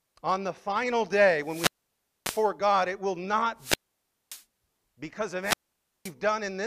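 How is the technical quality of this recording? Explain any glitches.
The recording is interrupted three times by wireless microphone squelch dropouts. They fall at 1.41 to 2.50 s after "on the final day", 3.57 to 4.44 s between "it will" and "because of", and 5.42 to 6.13 s after "because of". The radio signal fades. Hiss rises. Then the receiver's squelch mutes the output for about 0.52 to 0.59 s before the speech returns.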